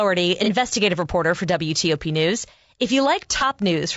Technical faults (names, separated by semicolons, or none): low-delay AAC compression; AAC frame loss with concealment